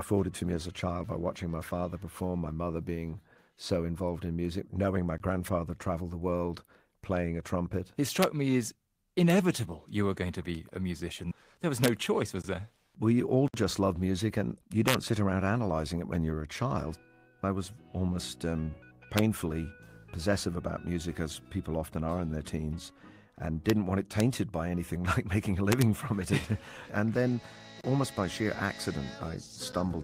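At 5.18 s you get the first block of digital silence: a 20 ms run of zeros, probably the output buffer not being filled in time. It drops out and comes back with no fade. The same hole turns up at 12.42 s (20 ms), 13.48 s (60 ms, a short gap rather than a tick), 27.81 s (about 31 ms) and 29.72 s (about 10 ms, basically a single tick).

Between those, integer overflow kicks in at 8.23, 11.84, 14.88, 19.18, 23.70, 24.20 and 25.72 s. The loudest peaks go past the integer limit by about 0 to 3 dB and wrap to the opposite sign instead of being held at the limit. The result is harsh cracks, much nastier than clipping. The one at 25.72 s lasts about 100 ms.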